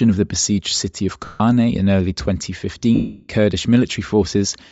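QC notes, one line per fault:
Throughout, Bluetooth LC3 compression: the speech carries plainly audible codec damage, with a breathy, grainy edge where the upper spectrum appears to have been zeroed and refilled with noise. This is likely LC3 at a low rate, consistent with about 32 kbps in 10 ms frames.
1.25–1.40 s and 2.95–3.28 s, lost LE Audio frames: after "the besieged city of", the sound turns to a noisy smear for 150 ms before "in early", then again for 340 ms. The decoder repeats the last spectrum with random signs, and the longer gap fades toward silence.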